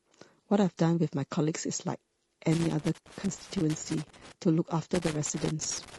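Speech runs throughout with a rough, grainy texture, noise filling the gaps between harmonics and a synthetic-sounding top band, likely from low-delay AAC compression (AAC-ELD) at a low bitrate near 32 kbps. Loose connector crackle breaks in from 2.52 to 4.32 s and again from 4.95 to 5.98 s: irregular scratchy bursts where an intermittent contact repeatedly chops the signal.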